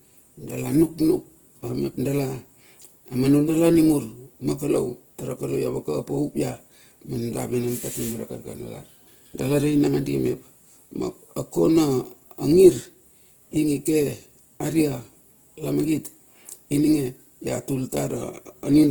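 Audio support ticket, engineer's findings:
Speech grainy and rough for the whole clip, no muffling. Likely Opus compression in music (CELT) mode, starved of bits, which fits a rate near 16 kbps: band energies kept, fine detail replaced by folded or noise fill. Spectrogram: content reaching about 20.2 kHz, few holes, but upper bands speckled and noise-textured, harmonics smeared instead of cleanly striated. Waveform looks normal; damage is spectral.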